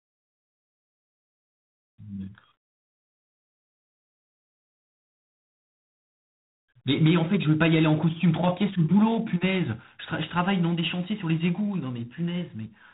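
From start to finish the speech has the sound of G.726 ADPCM, the adaptive differential coding used on telephone and cordless links. Rather than sending each sample, it sends a few bits of difference from a running prediction. The damage here is plainly audible, a harsh, rasping hiss that rises and falls with the speech level, coarse enough to fit the 24 kbit/s mode. Everything above about 3.8 kHz is gone, so the speech sounds narrow and boxy.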